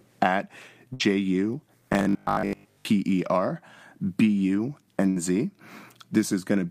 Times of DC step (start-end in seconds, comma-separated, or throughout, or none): none